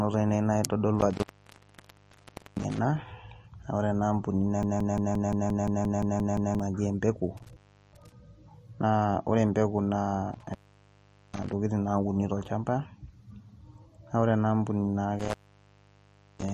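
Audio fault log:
throughout, MP3 compression: The speech has a plainly audible watery, swirling quality, with metallic chirps on s sounds and smeared consonant attacks, and nothing is present above 14.1 kHz. This is likely MP3 encoding at a bitrate that fits roughly 40 kbps. With so few bits, the encoder drops weaker frequency components, which flicker in and out between frames, and it cuts the treble at a fixed point.
1.00–2.79 s, 7.37–8.12 s, 10.33–11.53 s, 15.19–16.53 s, intermittent contact: The sound breaks up and drops out four times, with crackle where it cuts out and returns. The open stretches last about 1.35 s, 0.37 s, 0.79 s (starting just after "empeku naa") and 1.05 s. A loose cable or plug is briefly losing its connection, so the signal path opens and the audio stops until contact is restored.
4.63–6.60 s, broken-record loop: A 174 ms fragment repeats back to back 11 times, producing a mechanical stutter that lasts almost two seconds. 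The likely cause is a stall in the player, encoder or stream, which kept resending the last piece of audio it held. The audio that should have played during that time is lost.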